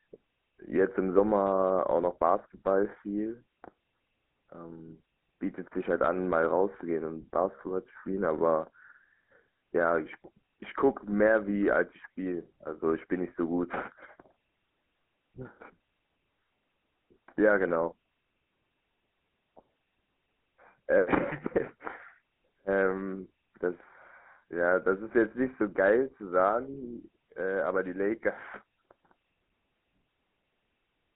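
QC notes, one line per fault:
throughout, GSM full-rate codec: the speech passes through a 13 kbps vocal-tract model with sparse pulse excitation, leaving a buzzy, gravelly roughness and a band of about 200 Hz to 3.4 kHz.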